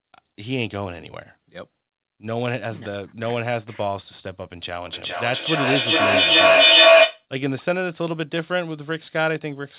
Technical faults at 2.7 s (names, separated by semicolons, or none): none